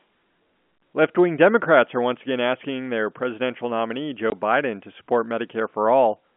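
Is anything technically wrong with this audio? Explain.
Yes. At 4.3 s, just after "asking their presidential nominee", there is packet loss filled with silence: a chunk of the stream never arrived and the receiver played silence in its place. The speech drops out for 20 ms, which fits a single lost packet, and the gap has hard edges. The surrounding audio comes through a G.711 telephone line, so it is limited to roughly 200 Hz to 3.4 kHz.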